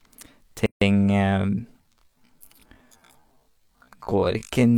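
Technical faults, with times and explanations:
0.66 to 0.82 s, gap at a join of encoded pieces: a silence of about 154 ms cuts into continuous speech, with edges blurred by the codec, before the sound resumes exactly where it stopped. Separately encoded segments were joined without trimming, so each segment's leading encoder delay and padded final frame remain as dead air. The gap matches a join spacing of 4 s.
1.77 to 4.77 s, time-stretched section: from 1.77 s to the end, the pace drops abruptly to about 0.54 of its earlier rate while the pitch stays the same. The slowed passage drags. This is likely software stretching the audio to fit a longer duration, keeping the pitch steady by repeating short slices.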